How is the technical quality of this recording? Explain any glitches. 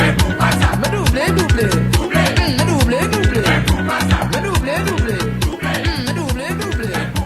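The quality drops for a two-second stretch from 3.29 to 5.29 s, where the adaptive stream switched to a lower bitrate. The connection evidently slowed, so the player swapped to a leaner encoding mid-playback. The sound suggests a move from a full-quality AAC stream to a low-rate HE-AAC one. The top end is gone above 14.9 kHz, the treble turns thin, and coding artefacts rise. Both switches are abrupt and leave no gap.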